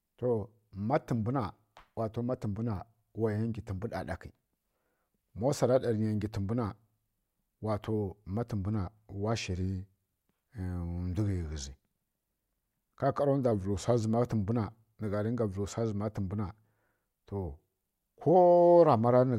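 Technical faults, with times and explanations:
3.73–4.56 s, drift correction step: the speech runs 6.4% fast and rises 108 cents, about a semitone, then returns to normal, likely a clock-matching resampler draining its buffer in one jump.
9.61–10.50 s, 13.52–14.02 s (ending just before "zǝma tǝmbwu") and 17.47–18.29 s, drift correction step: the speech slows 6.4% and drops 115 cents, then returns, likely as the same rate jump refills the buffer.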